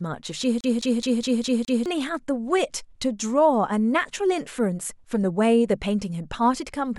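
From 0.61 to 1.86 s the speech jams like a CD stuck on one turn: a 0.21 s slice repeats six times with brief mutes, evenly spaced, unlike irregular network dropouts.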